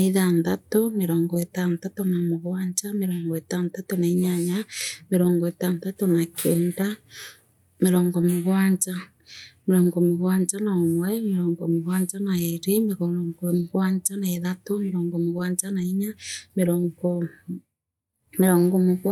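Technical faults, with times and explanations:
No technical faults can be heard anywhere in this speech recording. There is nothing to list by time, and nothing that needs explaining.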